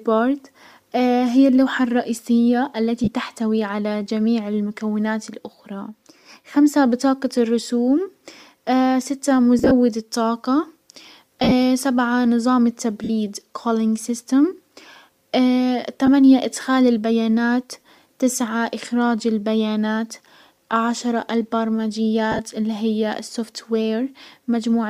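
Lost LE Audio frames interrupt the speech at 3.04 s, 9.59 to 9.72 s, 11.40 to 11.52 s, 13.04 to 13.10 s, 16.06 s and 22.32 to 22.40 s. At each one the decoder concealed the gap by reusing the last spectrum with scrambled phase, so the speech briefly turns into a grainy, noisy smear lasting from about 15 ms up to 82 ms. Those gaps fit 7.5 ms frames, consistent with light, likely LC3, compression. At 9.59 s and 11.40 s the losses scatter over 120 ms, with runs up to about 40 ms. At 22.32 s shorter runs spread over 75 ms.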